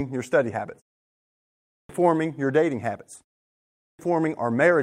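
After "your study habits" there's a pause of about 0.71 s, and when sound resumes at 1.44 s, the first roughly 0.45 s is simply gone until 1.89 s. That's a clipped start after a pause. The output device dozed off during the silence and took a moment to wake and lock again, so the next phrase jumps in abruptly with its opening sounds chopped off.

Right after that, at 1.99 s, there's a brief 20 ms rough patch just ahead of "your dating habits." That's a lost packet rebuilt from error correction. A single packet went missing, but the next one carried a low-bitrate backup copy, and the decoder played that instead. There's no gap, just a moment that sounds grainier and noisier.

Then the clipped start after a pause happens again. After "your dating habits" there's a shorter pause of about 0.35 s, and the device loses the first roughly 0.48 s of the next sound, from 3.51 to 3.99 s. The result is the same hard, chopped entry out of silence.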